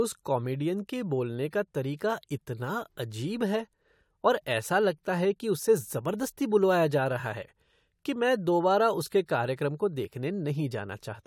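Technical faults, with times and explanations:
No technical faults heard.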